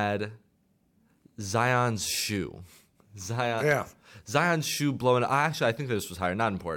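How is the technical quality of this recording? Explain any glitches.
The technical quality of the recording is sound, with no glitches to explain.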